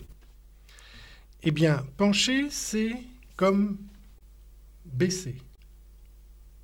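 All through the clip there are small, unevenly spaced timing hiccups. This is clock drift between sender and receiver, with the sender's clock running roughly two percent slow.

From 0.05 to 0.10 s the opening sound hangs on for about 29 ms. This is a short stall from a late packet: the jitter buffer ran empty, and the receiver stretched the last sound until the packet arrived. Nothing is missing.

From 1.21 to 5.36 s the playback runs at about 99% speed. These are repeated timing corrections, small repeats that add around 50 ms in total to keep pace with the slower sender.

At 4.18 to 4.23 s and again at 5.55 to 5.60 s a sound is briefly held, by 22 ms each time. Each is another short stall from a late packet, filled by stretching, with nothing lost.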